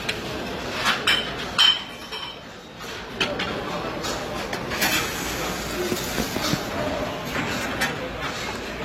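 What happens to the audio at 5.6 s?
At 5.6 s the sound carries the same layered coding artefacts heard across the whole clip, with nothing above about 16.2 kHz. The likely cause is transcoding between lossy codecs, an AAC-LC pass followed by HE-AAC at low bitrates. Unlike a single codec pass, two distinct sets of codec artefacts sit on top of each other.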